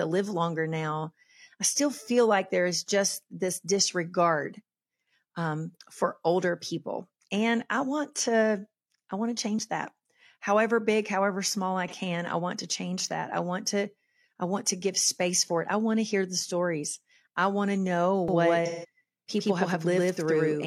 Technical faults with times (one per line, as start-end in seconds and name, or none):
11.88-11.93 AAC frame loss with concealment
18.28-20.66 doubled audio track
18.65-18.88 AAC frame loss with concealment